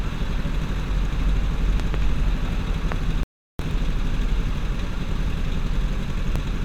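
At 1.24 s the sound breaks up briefly from damaged data in the compressed stream, and the same thing recurs at 3.71 s and 6.36 s. At each point the decoder misreads corrupt frames, loses sync and resumes at the next valid header. Each shows as a short smear of broadband junk in the spectrogram, followed by a small discontinuity in the waveform.

Between 1.80 and 1.96 s there are two loud pops, and a single one follows at 2.92–2.94 s. Each peaks roughly 10 dB above the surrounding sound, which continues underneath. They are likely voltage spikes, perhaps from a switch or static. On the waveform they stand out as tall, narrow spikes, and on the spectrogram as thin vertical lines spanning all frequencies.

From 3.23 to 3.59 s an audio dropout to silence removes 360 ms. The sound cuts off mid-flow and then resumes, most likely because the input link failed while zeros were still being written. 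The waveform is flat there, and the spectrogram shows a blank gap with no room tone left.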